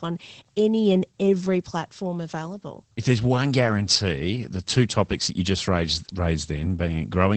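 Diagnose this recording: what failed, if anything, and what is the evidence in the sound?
The failure is at the codec stage: Opus voice compression runs through the whole speech clip. Nothing is left above about 8.5 kHz, so the speech sounds muffled, and the coarsely coded excitation adds a plainly audible hoarse, slightly robotic edge. The sound points to the SILK linear-prediction coder in wideband mode at a low rate, which fits about 12 kbps. On a spectrogram, energy stops along a flat ceiling near 8.5 kHz from start to end, and the harmonics below it look smeared.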